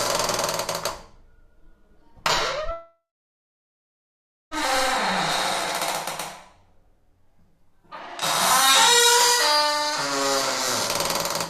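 At 2.71 s the sound breaks off and does not return until 4.54 s, with a long network dropout as the likely cause. The last sound is stretched into a buzzy tail that fades over a few tenths of a second, leaving about 1.5 s of near silence. About 1.8 s of material is lost, so the audio resumes further on. A waveform shows a decaying smear, then a flat line. A spectrogram shows smeared bands fading into a blank gap.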